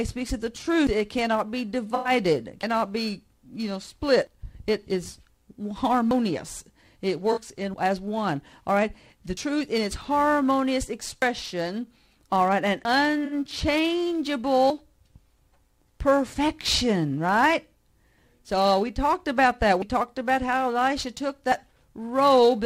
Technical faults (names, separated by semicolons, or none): AAC frame loss with concealment